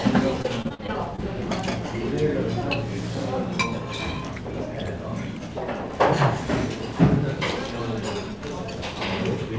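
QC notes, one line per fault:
0.42 to 1.20 s, repeated packet loss (robotic sound): six short dropouts, the longest about 45 ms, about 140 ms missing in all. Each hole is patched by stretching the previous sound, so about 18% of this stretch is filler, which sounds choppy over the call path's 8 kHz band limit.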